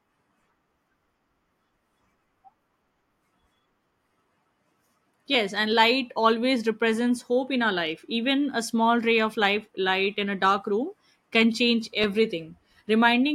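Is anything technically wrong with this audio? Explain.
Yes, one thing. Clock drift buffer slips show up from 2.01 to 12.04 s: a click every 3.34 s, likely mismatched device clocks dropping or repeating a few samples.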